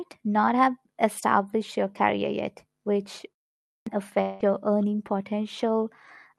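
At 3.68 s, speech resumes after a pause of 0.42 s with a clipped start. The output device went idle during the gap and needed time to wake. About 185 ms of the onset is lost, so the sound begins abruptly, missing its first part.

From 4.21 to 4.43 s, a stretch of audio is replaced by a fading buzz that continues the last sound. This is likely a long network dropout. The receiver filled the gap with that smeared tail, and the lost audio never plays.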